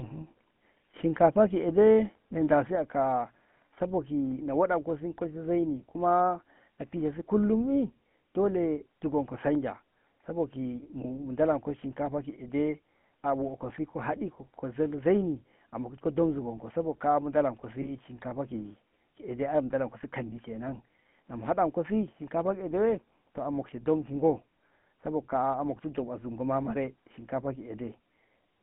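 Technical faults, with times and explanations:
throughout: GSM full-rate codec. The sound has a buzzy, gravelly roughness, consistent with the 13 kbps full-rate coder. It models the vocal tract and excites it with sparse, regularly spaced pulses, discarding much of the excitation detail. The band is confined to 150 Hz–3.4 kHz.
2.75 s to the end: one channel drops out. The level falls abruptly by about 6 dB and stays down. This likely comes from losing one stereo channel before the mono sum, so only half of the shared signal remains.
17.82–17.90 s: lost GSM frames. A brief rough, metallic ringing replaces the sound, which fits a single lost 20 ms frame. The decoder repeated the last good frame's settings instead of reconstructing the missing audio.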